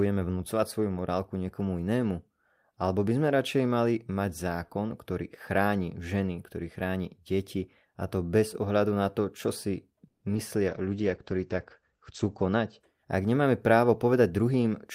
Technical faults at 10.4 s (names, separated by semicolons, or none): short concealed packet loss